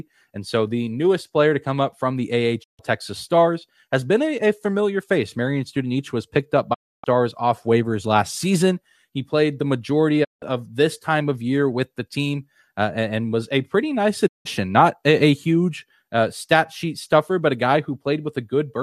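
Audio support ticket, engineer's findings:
Digital broadcast dropout, four holes in speech: 2.62–2.81 s, 6.73–7.05 s, 10.23–10.44 s, 14.26–14.47 s. Receiver mutes with a 20 ms fade to true silence when frames go bad; gaps fit whole 24 ms frames. No concealment or crackle, unlike an analog or cable fault. Sound resumes further on, with missing material skipped rather than delayed.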